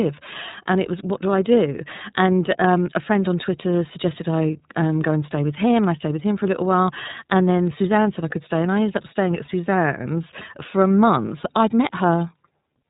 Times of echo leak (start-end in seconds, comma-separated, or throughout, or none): none